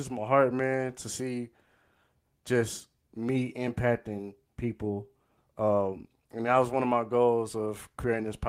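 No technical faults are audible.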